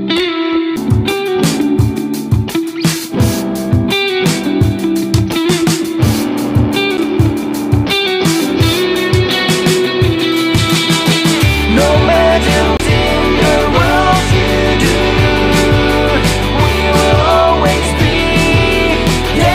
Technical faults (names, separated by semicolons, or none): CD skip